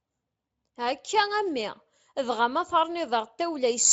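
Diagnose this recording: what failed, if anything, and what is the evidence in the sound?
Nothing in the chain has failed: the speech carries only faint traces, if any, of Speex coding at a high-quality setting, and no stage from capture to playback shows a defect.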